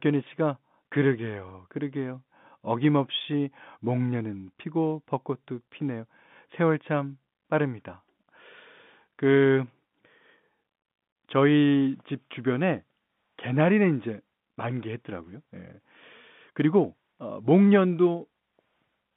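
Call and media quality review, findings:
Packet loss with pitch repetition, 1.49 s: brief buzzy hold bridging a 10 ms gap, fitting one lost packet; receiver concealment repeated the last pitch period.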